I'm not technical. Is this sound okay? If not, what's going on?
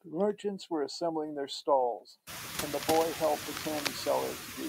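No. Two problems can be heard in this speech clip.

Throughout, there are noise suppressor artifacts. A noise-reduction process is trying to pull down the steady background noise, working in very short slices of time. Here it only turns that noise down slightly, but the leftover background sinks in the gaps and swells back under the speech, rather than staying as a steady, even floor.

From about 2.71 to 3.87 seconds there is cable scratch noise: a dense, uneven scratching or rustling laid over the speech, fairly prominent while it lasts. The likely cause is a worn cable, plug or control being moved, so the electrical contact keeps flickering and adds bursts of crackle. This is separate from the room's own background noise, which gets noticeably louder from around 2.5 seconds but stays well beneath the speech.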